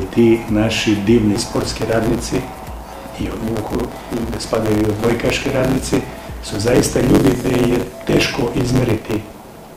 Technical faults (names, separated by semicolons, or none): block size mismatch (truncated)